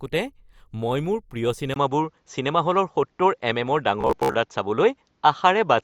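At 1.74 s the input likely switched to a poorer device. After a 20 ms gap, the speech turns duller, with a level shift of about 5 dB and a new, faint noise floor.

From 4.01 to 4.35 s, robotic sound from repeated short buffers likely sets in. About 15 ms of audio loops while most of the real speech is skipped, leaving a rigid, metallic 66.8 Hz buzz.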